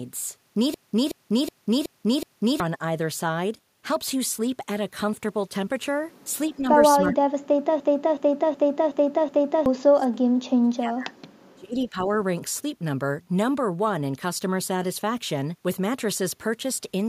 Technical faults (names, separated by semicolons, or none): system hang loop; speech suppressed in double talk